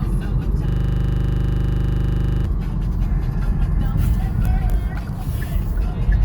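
From 0.69 to 2.45 s, a system hang loop occurs: the computer or its audio driver stalled while the sound hardware kept replaying the same 40 ms stretch of its ring buffer. That short fragment repeats exactly, over forty times, at a rate of 25 Hz. At that rate each pass is too short to hear as its own event, so the everyday sounds give way to a steady, rough buzz pitched at the loop rate.

At 3.39 s, an adaptive stream at a lower bitrate takes over and continues to the end of the clip. A slowed connection made the player switch to a leaner encoding, which fits a drop from Opus at 64 kbit/s to about 24 kbit/s. The change is abrupt, with no gap. Content still reaches about 20.1 kHz, and coding artefacts rise.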